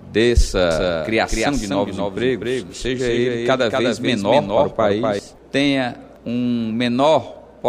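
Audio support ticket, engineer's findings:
Doubled audio track, 0.71 s to 5.19 s. Full-band second copy around a third of a second late, about 5 dB down, no decay or room colour, abrupt entry and exit. Likely a second capture via a slower path or an edit holding two offset copies.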